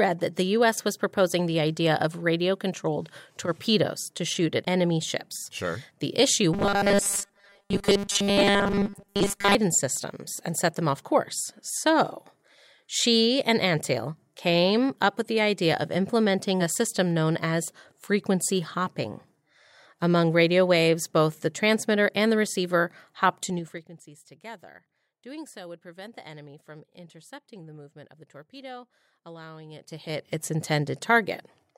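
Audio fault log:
6.54–9.55 s, robotic sound from repeated short buffers: the speech turns into a stiff, metallic buzz pitched at 200 Hz that still loosely tracks the syllables. This is likely a playback path starved of new audio, filling each gap by looping the most recent slice, which fits a buffer of about 5 ms. Most of this stretch is repeated material rather than fresh signal, so the fixed loop rate imposes that pitch over the voice.
23.41–23.96 s and 29.72–30.37 s, zipper noise: a fast ticking, zipping texture rides on the speech while the level moves, down by about 20 dB in the first span and back up by about 20 dB in the second. Each change is applied in unsmoothed 3 dB steps at roughly ten per second. Every jump creates a small discontinuity in the waveform, and these discontinuities are heard as clicks.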